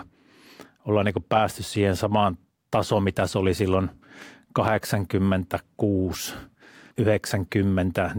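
No technical faults are audible anywhere in this recording.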